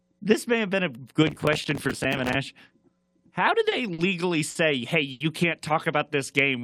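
Right after "may have been a", from 1.27 to 2.35 s, the speech breaks into processor overload crackle. The processor could not finish its tiny audio buffers on time. These were only a few milliseconds each, and dozens in a row came late. Each missed buffer was filled with a scrap of old audio that has hard edges. Together these scraps make a gritty, tearing crackle over the voice. It stops once the load eases.

Next come four short stalls from a late packet. Each time, a packet arrived late and the jitter buffer ran dry. The receiver held the last sound until the packet came, then carried on from the same spot. Nothing is lost. The first stall is at 3.69 s and is held for 20 ms. Two more, at 3.93 s and 4.50 s, last 50 ms each. The last, at 5.11 s, lasts 90 ms. Each one sounds like a brief held sound with a faint buzz or dip.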